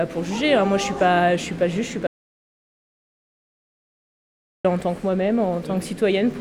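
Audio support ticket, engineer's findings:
Audio dropout to silence, 2.07 to 4.65 s: input lost for 2.58 s, silent gap, no room tone. Likely an input link or device drop while the recorder kept writing.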